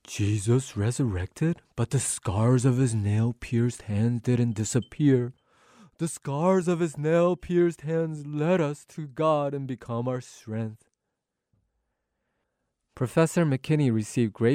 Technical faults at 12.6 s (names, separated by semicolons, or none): none